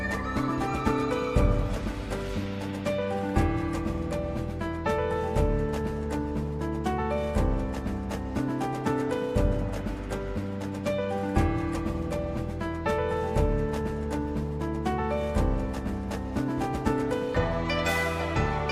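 No technical faults are audible anywhere in this audio.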